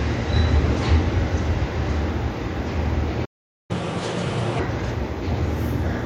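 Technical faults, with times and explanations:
3.25–3.71 s, playback stall: The sound cuts out in mid-flow and the output sits silent for about 0.44 s before the audio returns. The likely cause is the player running short of data, or its playback thread being held up, so nothing reached the output until it recovered. Because the silence lands abruptly inside continuing sound, rather than at a natural pause, it reads as a dropout.
3.71–4.59 s, catch-up at higher speed: As soon as the sound resumes, it runs at 1.5 times normal speed, and its pitch rises by about seven semitones. The player is working through the backlog left by the stall by resampling it faster, so tempo and pitch go up together, giving a hurried, raised quality. At 4.59 s the lost time has been recovered, and both drop back to their normal rate.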